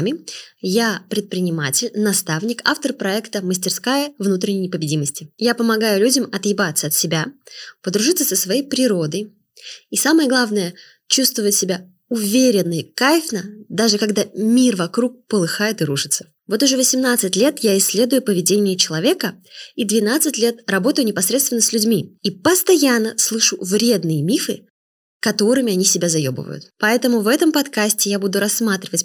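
Nothing technically wrong can be heard anywhere in the speech recording, so there are no fault times or causes to give.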